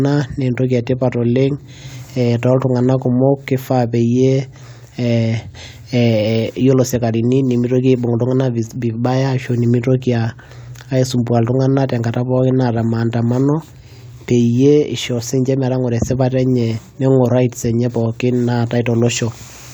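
No technical faults can be heard at any point in the speech. There is nothing in the signal that calls for a timestamp or a fix.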